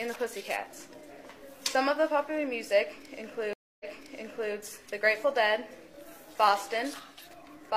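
At 3.53 s a stream reconnect begins, and its effects last until about 4.54 s. The connection dropped and the player went silent for 265 ms. It then reconnected and started a fresh decoder partway through the stream. The server resent a burst of audio, so playback resumes 743 ms earlier than where it cut off. That stretch of sound is heard twice. The first frame after the gap fades in.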